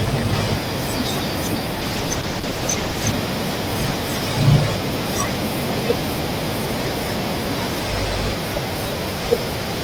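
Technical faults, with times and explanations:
1.83–3.19 s, call bitrate drop: the bandwidth estimate fell and the encoder was starved of bits, and the sound points to a fall from about 32 to 11 kbps, lasting 1.29 s. Coarser coding and a clipped top end make the speech rough and muffled until recovery.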